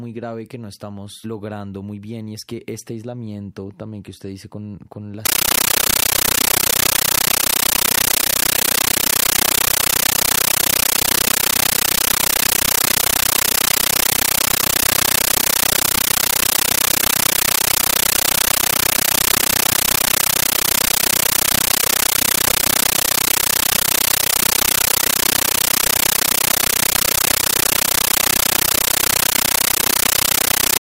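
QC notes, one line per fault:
5.26 s to end: compressed stream played as audio. Undecoded AC-3-style data replaces the speech with loud chattering static, 13.3 ms noise bursts repeating 31.25 times a second.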